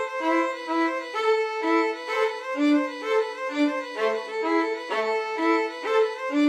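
No technical faults can be heard anywhere in the recording, and the signal stays steady and intact throughout.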